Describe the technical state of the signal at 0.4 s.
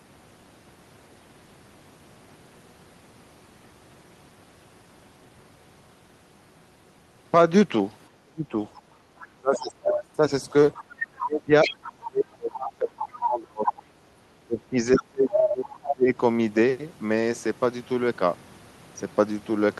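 At 0.4 s the signal is intact, with no dropout, distortion, glitch or other fault audible at that moment.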